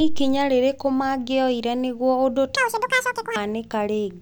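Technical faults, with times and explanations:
2.56 to 3.36 s, audio read two samples at a time (double speed): right after "rĩrĩkũ mangĩoire nĩguo ũndũ" the speech suddenly races along at twice its pace and jumps a full octave, 12 semitones up. The reader is taking each pair of samples as one frame, as if the stream held two channels or wider samples, so half of them get skipped.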